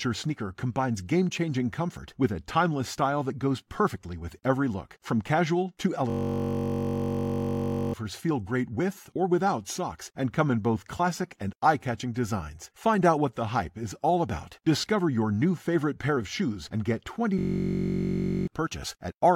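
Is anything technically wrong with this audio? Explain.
Yes. A system hang loop occurs from 6.10 to 7.94 s and from 17.39 to 18.48 s. A frozen system let the hardware replay one 21.33 ms buffer, which fits a 1024-sample buffer. The exact repeats produce a steady 46.9 Hz buzz rather than silence or random stutter, and about two seconds and one second of speech are lost.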